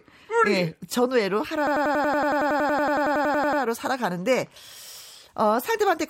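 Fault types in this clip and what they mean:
System hang loop: from 1.67 s to 3.62 s the speech freezes into a single 93 ms fragment that replays exactly 21 times. The result is a machine-gun stutter at about 10.8 repeats per second, consistent with a 4096-sample ring buffer left cycling while the system stalled. On a waveform, identical blocks tile edge to edge. On a spectrogram, the same short pattern recurs as a regular row of matching vertical slices.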